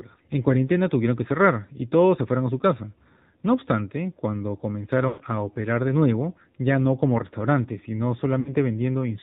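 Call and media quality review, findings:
AMR narrowband mobile codec, whole clip: speech band-limited, buzzy and synthetic, consistent with a low AMR-NB mode around 7.4 kbps. Vocal-tract model with sparse pulse excitation. Spectrogram shows a hard ceiling at 4 kHz with nothing above.

Lost AMR speech frames, 5.08–5.22 s and 8.40–8.55 s: concealment of about 120 ms and about 60 ms, smeared and fading. Decoder repeats the last good pitch and filter with falling gain. The waveform envelope tapers, and the spectrogram shows stretched, flattened harmonics.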